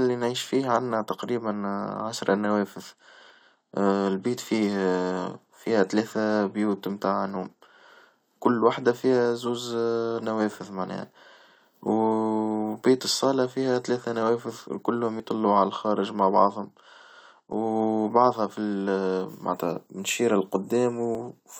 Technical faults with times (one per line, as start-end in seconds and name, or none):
3.30 audio missing between chunks
9.25 audio missing between chunks
15.20 audio missing between chunks
21.15 audio missing between chunks